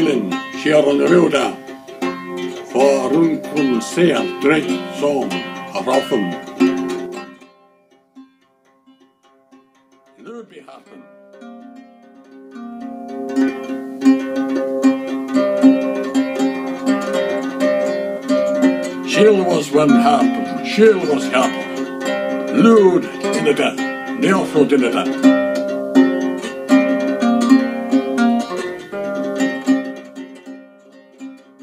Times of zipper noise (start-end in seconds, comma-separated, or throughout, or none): 6.97-7.52, 12.26-13.65